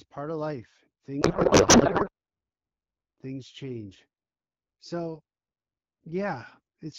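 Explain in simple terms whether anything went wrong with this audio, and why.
Something went wrong right after "part of life", from 1.21 to 2.10 s. The speech turns into garbled noise and warble that barely follows it. This is a codec payload misread. The HD Voice call data was likely packed one way and unpacked another, putting every field in the wrong place.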